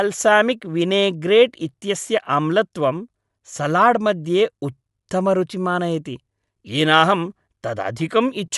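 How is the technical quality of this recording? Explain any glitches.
The recording is compromised throughout by audible codec damage, most likely Bluetooth LC3 compression. A transform codec working at a modest rate, consistent with roughly 48 kbps and 10 ms frames, discards and noise-fills the upper spectrum. The speech gains a breathy, grainy edge, with nothing above 11.5 kHz.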